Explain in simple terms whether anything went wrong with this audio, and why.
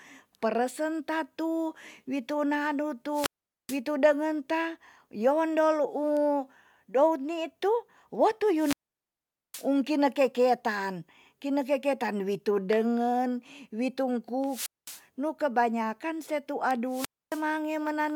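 A wireless microphone squelch dropout happens four times: the radio signal weakens, so the receiver mutes it. You hear a burst of hiss, then near silence, at 3.11 to 3.80 s, 8.54 to 9.69 s (before "kine keketan kine keketan"), 14.42 to 15.03 s and 16.87 to 17.46 s.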